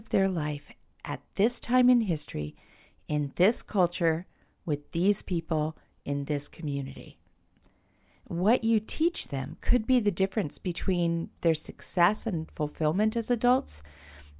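No technical faults are audible anywhere in the speech recording.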